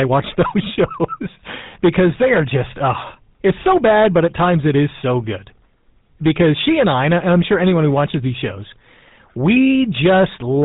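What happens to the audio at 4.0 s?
At 4.0 s, as throughout the clip, loud moments of the speech crackle and fuzz harshly: hard clipping, from a signal driven about 9 dB too hot, squares off a few percent of samples. The voice also sounds buzzy, gravelly and band-limited, with nothing above 3.9 kHz. This is the GSM full-rate codec at work, its pulse-driven vocal model fitting a 13 kbps stream.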